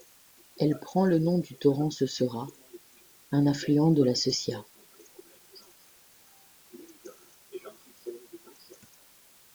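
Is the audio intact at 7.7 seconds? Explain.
No. At 7.7 seconds the speech carries low bit depth with dither, as it does for the whole clip. The sound is quantised to very few levels, which fits 8-bit audio. Random dither is added before each value is rounded. This turns the rounding error into steady white noise. It is heard as a constant, even hiss, roughly 30 dB below the speech. There is no gritty distortion on the speech.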